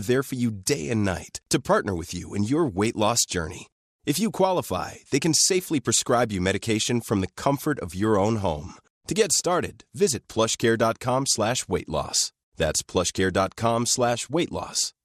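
Speech throughout, with a dull, gurgly, granular edge as top bands flicker out, likely MP2 compression starved of bits, which fits something around 80 kbps.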